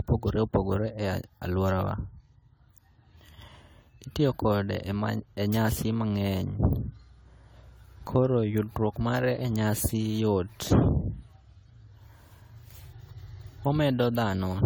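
From start to finish the speech has a swirly, smeared, hollow quality, with consonant onsets blurred and a watery texture more marked than a single lossy encode would leave, even though content reaches up to about 20.1 kHz. This is likely generation loss: the audio seems to have been decoded and re-encoded around seven times with AAC-LC, at a rate that points to about 64 kbit/s, each pass requantising on a shifted frame grid and stacking fresh noise and spectral holes.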